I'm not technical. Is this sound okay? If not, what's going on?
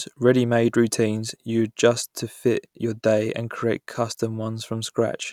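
Yes, nothing in this recording points to a technical problem with how the sound was captured or passed along.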